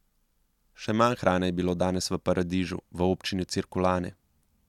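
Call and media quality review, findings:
No faults found in recording.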